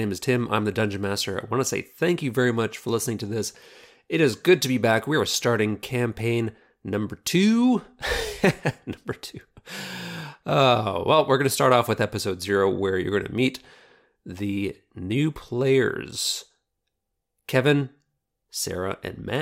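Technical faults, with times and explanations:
No technical faults can be heard anywhere in the speech.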